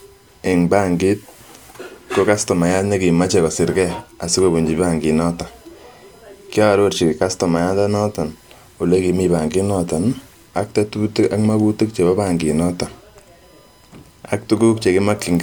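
A speech recording with a faint, steady 1 kHz whine running underneath from start to finish, sitting roughly 40 dB below the voice. It is USB whine: current drawn in the bus's 1 ms frames leaks into the audio through shared power or ground.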